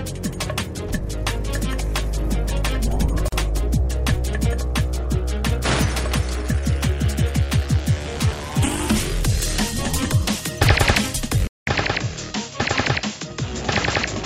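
At 3.28 s a silence of about 41 ms, ending at 3.32 s, opens in otherwise continuous sound: a gap at a join of encoded pieces. Two separately encoded segments were spliced without trimming the encoder's start-up delay and end-of-frame padding, so the padding remains as dead air. The edges are abrupt but slightly smeared by the codec, and the sound resumes exactly where it left off. Nothing is lost, which separates this from a dropout.

At 11.47 s, after a silence of about 200 ms, the sound changes character and stays that way to the end. Everything above 7.6 kHz is gone, so it turns duller and boxier. It becomes a few decibels quieter, and a new noise floor sits roughly 35 dB below the signal. This is most likely an input switched to a poorer device. Unlike a gradual filter or a codec bitrate drop, the band, tone, level and background all change together at one instant.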